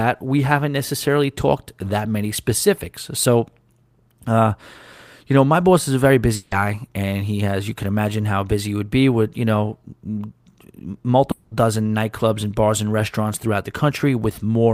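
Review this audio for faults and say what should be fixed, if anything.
At 6.35 to 6.54 s and again at 11.31 to 11.54 s the speech gives way to a smeared, buzzy continuation of the preceding sound, about 160 ms and 200 ms long. Speech then resumes with that stretch gone. This is most likely a long network dropout: packets stopped arriving, and the receiver's concealment stretched the last audio across the gap. A larger jitter buffer with redundancy or FEC on the stream would prevent it.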